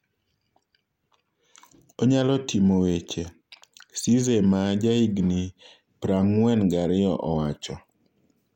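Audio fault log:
No faults heard.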